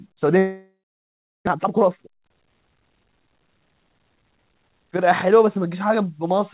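From 0.38 s to 1.49 s the sound stops and is replaced by a fading buzz, then about 0.7 s of silence, before resuming with roughly 0.6 s of audio missing. This is a long network dropout, likely packets lost in transit. Unlike a brief packet-loss glitch, the concealment gives up entirely.

From 1.52 s to 3.27 s a jitter buffer speed-up plays the audio at about 127% speed, trimming roughly half a second of built-up delay. Pitch stays unchanged, so it sounds hurried rather than chipmunk-like, which separates it from a plain resampling error. The band ends at 4 kHz throughout, consistent with a G.711 A-law call codec.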